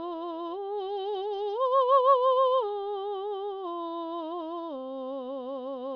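No technical faults can be heard anywhere in the music. Nothing in the recording calls for a time marker or a note on its signal path.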